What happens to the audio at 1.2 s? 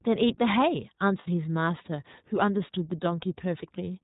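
From 1.20 to 1.28 s there is a short dropout from lost iLBC frames. About 60 ms of sound went missing, which fits three lost 20 ms frames. The decoder fills the hole by repeating the last pitch cycle, mixed with noise. So the gap sounds like a held, slightly buzzy vowel rather than silence. Each iLBC frame is coded without relying on the one before, so the sound comes back clean almost at once.

Underneath, the whole clip carries plainly audible iLBC codec damage. The bandwidth is narrowband, with nothing above 4 kHz. The excitation is coded frame by frame in 20 ms blocks, which fits the 15.2 kbps mode. That leaves the speech clear but rough and somewhat synthetic, including around 1.2 s.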